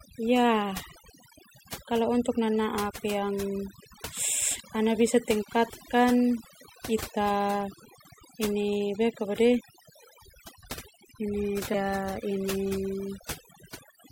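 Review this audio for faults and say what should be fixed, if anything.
Overdone noise removal runs through the whole clip: the suppressor pulls any frequency band sitting near its noise estimate far down, so the background drops and breaks up into twinkling specks and the speech loses its quieter detail. Using a gentler reduction setting on the noisy source would prevent this.

Stream segment skipped is the likely cause of the jump at 11.73 s, where the speech lurches forward with a small blip, consistent with one segment failing to load and playback continuing from the next. Retrying failed segment requests before advancing would prevent the gap.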